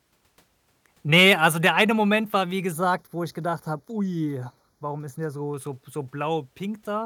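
From 2.72 to 5.54 s, after "war wie", channel delay (comb filtering): a roughly 0.2 ms lag summed to mono notches near 3 kHz, sounding hollow; spectrograms show dark horizontal bands.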